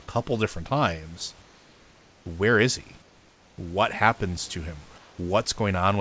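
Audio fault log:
1.42–2.26 s, 3.02–3.58 s, 4.98–5.18 s, comfort noise in place of the background: in the pauses after "different times" (ending as "where is he" begins), after "where is he", and after "happens to him", the room's real background gives way to a smooth, featureless hiss about 2 to 3 dB quieter. This likely comes from discontinuous transmission: the sender goes silent when no speech is detected, and the receiver synthesises shaped noise until the sound resumes.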